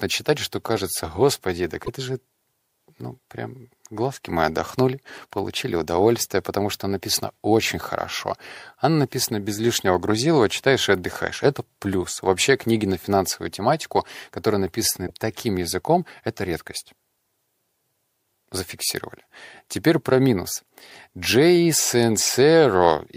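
At 1.85–1.89 s, 15.07–15.10 s and 20.89–20.91 s, a corrupt frame was decoded: damaged compressed data was played anyway, misplacing spectral energy across a few frames. Each is a brief chirp or noise burst, strongest first (about -10 dBFS), then about -25 and -40 dBFS.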